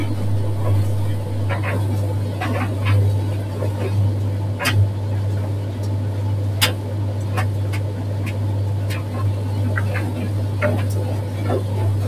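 I hear no technical faults.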